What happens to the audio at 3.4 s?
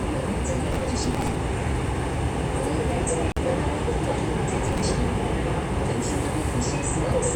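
An intermittent contact briefly opens in the signal path from 3.30 to 3.38 s, cutting the sound for about 46 ms, with crackle at both edges and faint hiss in the gap.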